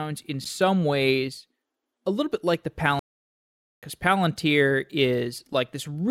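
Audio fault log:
2.99–3.83 s, playback stall: the speech halts right after "little bit like the" and stays silent for 0.83 s, likely because the player starved of data or was blocked. A clean mid-phrase silence this long separates it from brief dropouts.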